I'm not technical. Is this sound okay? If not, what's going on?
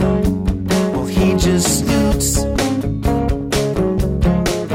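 No. There is DAB burbling from 0.93 to 1.29 s and from 3.41 to 3.77 s: weak digital radio reception corrupts bits, so parts of the audio jump about, giving short bubbling or watery blips.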